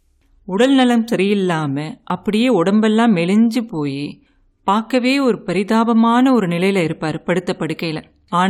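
At 2.10 s the speech makes a tiny skip as the waveform jumps abruptly. This is an overlap between stream segments: two segments' time stamps overlapped, and the player trimmed roughly 9 ms of audio that was never actually duplicated.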